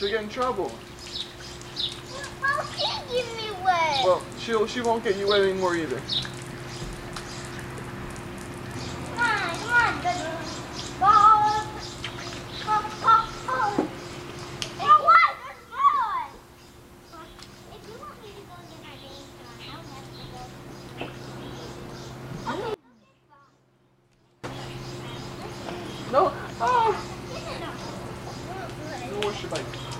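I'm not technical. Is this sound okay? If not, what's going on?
No. From 22.74 to 24.44 s there is an audio dropout to a faint residue. The sound suddenly drops to a faint trace for about 1.7 seconds. A brief signal loss is the likely cause.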